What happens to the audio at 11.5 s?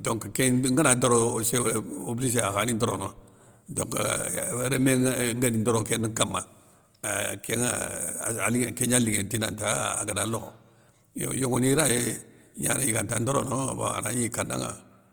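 At 11.5 s the speech carries the same damage heard through the whole clip, likely Opus compression in its music (CELT) mode. Short of bits, the encoder keeps each band's energy but fills the detail with folded copies of lower bands or with noise, so the sound turns rough, grainy and hissy rather than hollow. The damage is plainly audible and fits a low bitrate near 24 kbps, though the full bandwidth survives up to about 20.1 kHz.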